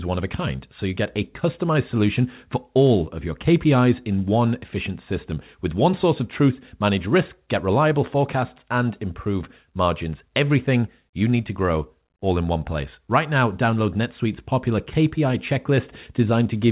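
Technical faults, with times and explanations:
No technical faults detected.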